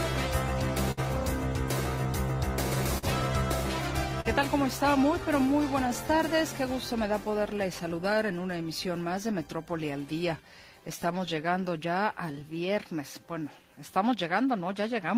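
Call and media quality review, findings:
Clock drift between sender and receiver: sender clock about 3% slow, persistent through the clip. Buffer keeps draining. Distinguished from network jitter by steady one-directional bias, not random spikes.

Short stall from a late packet at 0.91 s, 2.98 s and 4.21 s: last sound held 45–59 ms while jitter buffer sat empty, then resumes. Nothing lost, unlike a dropout.

Repeated timing corrections 5.09–15.13 s: receiver repeating small pieces, playback near 97% speed, about 0.3 s added overall. Unevenly spaced small edits, same direction, unlike isolated stalls.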